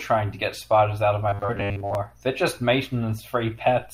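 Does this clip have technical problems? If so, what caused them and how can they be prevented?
Yes. Robotic sound from repeated short buffers, 1.29 to 1.95 s, after "spiders out of my": a looped 10 ms chunk likely forces a 100 Hz buzz, visible as flat, evenly spaced harmonic stripes and a roughly repeating waveform. A larger, steadier playback buffer that never runs dry would prevent it.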